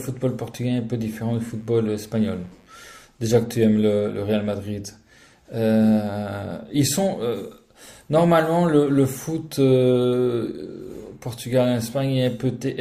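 Switching spikes from a dimmer, rectifier or unshielded line leak in at 50 Hz and its harmonics, so from 1.40 to 2.90 s a faint raspy mains buzz sits under the speech.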